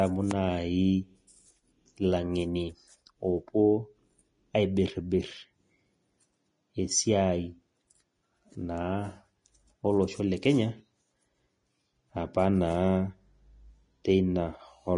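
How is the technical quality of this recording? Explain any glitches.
The recording is held back by audible lossy compression across the whole clip.

The Vorbis compression damage runs from start to finish of the speech. Nothing remains above about 10.6 kHz, and the treble that survives sounds hissy and grainy. This likely comes from a low-quality encode, consistent with a bitrate near 32 kbps. At that rate the encoder drops the top band and quantises the upper residue so coarsely that fine detail turns into noise-like grain, roughening tones and softening consonant attacks.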